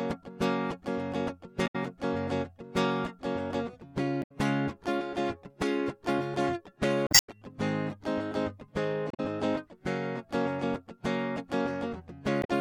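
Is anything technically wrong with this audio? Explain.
Yes. The music has damaged data in a compressed stream at 1.63–1.76 s, 4.19–4.32 s, 7.04–7.29 s, 9.08–9.20 s and 12.40–12.50 s. Corrupted bytes make the decoder misread frames and lose sync until it finds a valid header. Each spot is a brief glitch, the one at 7.04 s lasting about a quarter second.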